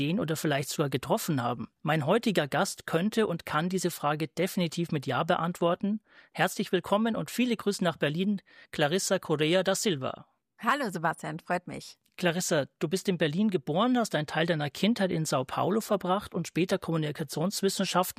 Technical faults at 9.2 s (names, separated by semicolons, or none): none